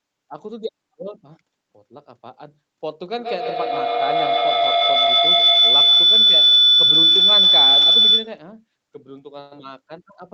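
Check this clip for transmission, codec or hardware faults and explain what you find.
One fault is present in this speech clip: a feedback howl, heard over a call path whose audio stops at about 8 kHz.

Feedback howl, 3.18 s to 8.47 s: two devices in one room share the call, so each trip from loudspeaker back into microphone adds level. Repeats narrow into a tone near 4 kHz, with each trip round the loop taking roughly 150 ms, peaking about 14 dB above the speech.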